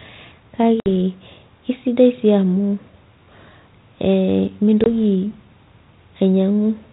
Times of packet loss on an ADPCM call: 0.80-0.87, 4.84-4.87

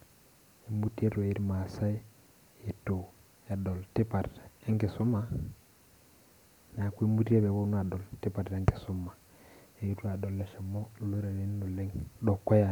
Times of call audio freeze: none

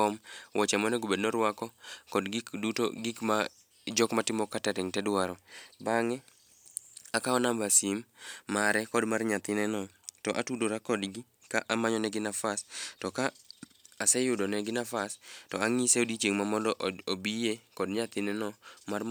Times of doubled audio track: none

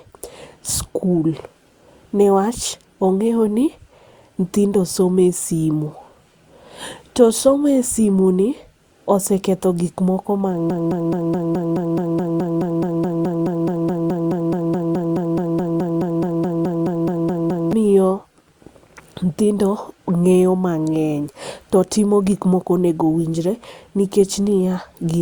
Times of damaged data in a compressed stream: none

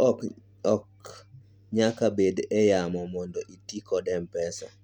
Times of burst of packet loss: none

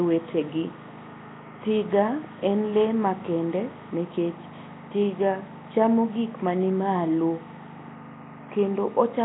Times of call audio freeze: none

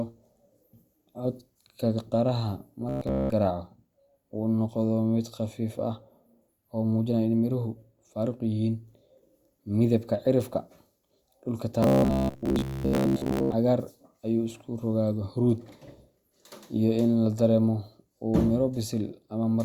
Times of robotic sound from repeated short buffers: 2.89-3.30, 11.83-13.55

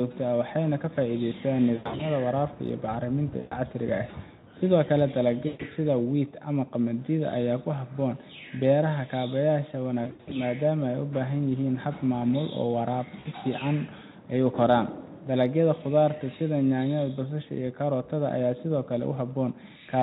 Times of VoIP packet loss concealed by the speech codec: 1.75-2.06, 3.39-3.55, 5.47-5.67, 10.03-10.43, 13.19-13.27

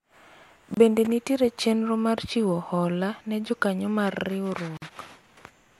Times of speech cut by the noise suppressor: none

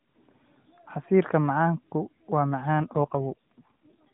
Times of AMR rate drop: 2.79-4.09

